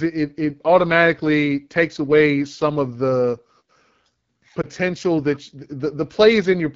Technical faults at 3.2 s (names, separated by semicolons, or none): AMR wideband (HD Voice) codec